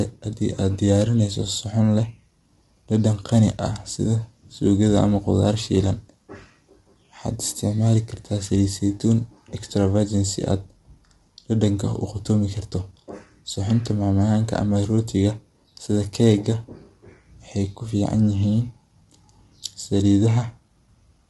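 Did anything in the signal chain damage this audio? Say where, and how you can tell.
Yes. The damage sits at the codec stage, and it runs through the whole recording. The speech sounds rough and grainy from start to finish. A noisy haze fills the gaps between the harmonics. Nothing is present above 11.6 kHz. This is likely low-delay AAC compression, the AAC-ELD type used for video calls. Its short frames resolve pitch harmonics poorly and need more bits to code cleanly. The plainly audible grit fits a bitrate of around 32 kbps.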